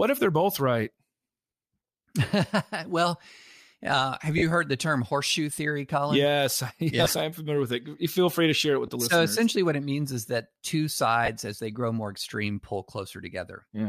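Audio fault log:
4.38–4.42 s, 7.04–7.06 s, 8.86–8.88 s, 11.26–11.28 s: lost LE Audio frames. The first gap, after "uh have", lasts 40 ms, and the rest last 20 ms. The LC3 decoder fills each gap by replaying the previous spectrum with random signs, so the speech briefly smears into noise instead of dropping out.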